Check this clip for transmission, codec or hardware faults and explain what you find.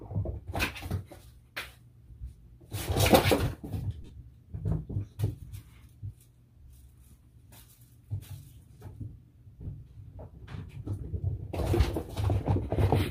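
There are lost LE Audio frames at three points. Between 4.02 and 4.12 s, about 60 ms of audio is missing, scattered over 90 ms, with the longest gap around 30 ms. Shorter losses follow at 9.63 to 9.65 s (22.5 ms) and at 11.22 s (7.5 ms, which fits a single 7.5 ms frame). For each gap, the LC3 decoder reuses the last good spectrum with randomised signs. Tonal content smears into a brief noisy hiss. That hiss is what tells it apart from a hard dropout to silence or a click.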